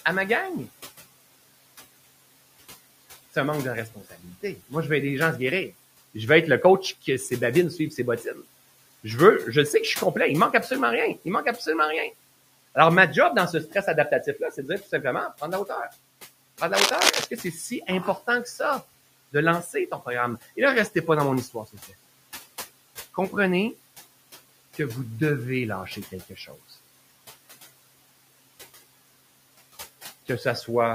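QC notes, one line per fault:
Throughout, noise suppressor artifacts: the background is pulled down by about 16 dB whenever it is taken for steady noise, so the room noise, about 19 dB below the speech, sinks in the gaps and swells back under talking.
7.78 to 8.38 s and 25.96 to 26.51 s, speech cut by the noise suppressor: the suppressor mistook quiet parts of the speech for noise and turned them down, by up to about 8 and 9 dB, over roughly 150 ms and 100 ms. They sound swallowed, not clipped or dropped out.
16.73 to 17.24 s, cable scratch noise: a dense, uneven burst of scratchy rustling, about as loud as the speech itself, most likely from a worn cable or connector being moved. Its irregular crackle sets it apart from a single click or steady hum.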